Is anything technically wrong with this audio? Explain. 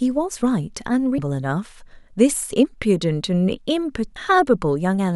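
Yes. At 1.18 s and again at 4.16 s the speech lurches forward, losing about 300 ms and then about 150 ms, each join marked by a short smeared blip rather than a sharp click. These are compressed frames skipped. Whole coded frames, here about 26.1 ms each, never reached the output, so the decoder resumed further on. The gaps suggest roughly ten frames and then five, and the overlap between frames blurs each seam.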